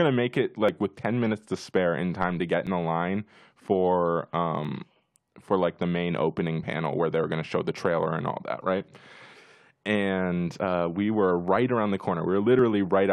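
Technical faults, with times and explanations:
0.69, 2.67, 4.65, 6.63, 8.61, 10.59 and 12.59 s, overlap between stream segments: a tiny click or skip every 2 s, including the one between "in time to get" and "the line for", one right after "the line for", and one just before "uh we were right". The 2-second segments' time stamps overlap, so the player trims roughly 5 to 10 ms of speech that wasn't actually duplicated, and the waveform jumps at each seam.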